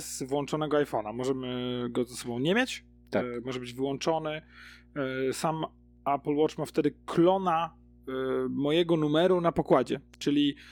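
From start to finish, mains hum runs under the speech. Somewhere in the recording chain, a ground loop or a nearby transformer has let the 60 Hz power line couple into the signal, and it stays there for the whole clip. The result is a steady low drone at 60 Hz, with a few low harmonics above it, sitting around 30 dB below the speech.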